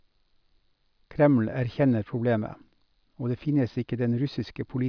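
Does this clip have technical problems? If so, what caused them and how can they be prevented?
No, nothing in this speech clip stood out as a technical problem on listening, so there is nothing here to trace to a cause or to prevent.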